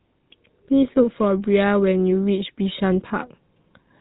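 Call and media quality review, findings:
Buzzy, gravelly roughness across the whole clip, plainly audible; no content above about 3.8 kHz. Probable component: GSM full-rate codec, consistent with a 13 kbps GSM stream. Mechanism: vocal-tract model excited by regularly spaced pulses, excitation kept at every third sample, so fine detail becomes buzz; narrowband coding stops the band near 3.8 kHz.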